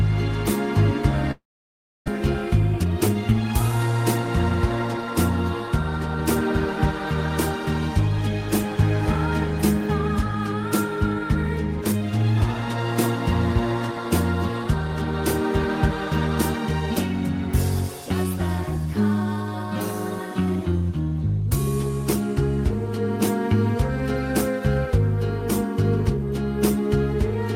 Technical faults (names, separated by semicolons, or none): long network dropout; jitter buffer speed-up